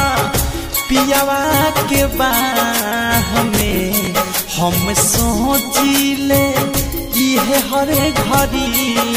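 From 3.56 to 4.07 s, processor overload crackle: around ten buffers of roughly 10 ms miss their deadlines and repeat old audio, producing a gritty, hard-edged tearing.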